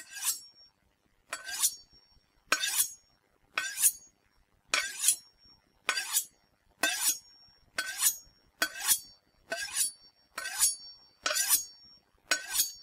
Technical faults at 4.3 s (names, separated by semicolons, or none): clock drift between sender and receiver; repeated timing corrections